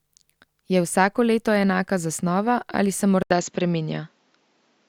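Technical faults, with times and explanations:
3.23–4.89 s, likely an input switched to a poorer device: after an 80 ms flat gap in the waveform, speech turns duller, the spectrogram is empty above 7.5 kHz, and a faint new noise floor appears at unchanged level.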